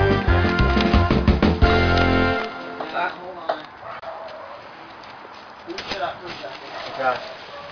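Aliasing is present from start to finish. The sound points to a sample-rate reduction to around 11 kHz without an anti-aliasing filter, so content above the new Nyquist limit of 5.5 kHz has folded back down into the band at unrelated frequencies. These mirrored components sit roughly 20 dB below the wanted signal, enough to make high-frequency detail gritty and metallic, and the spectrum stays dense right up to the 5.5 kHz edge.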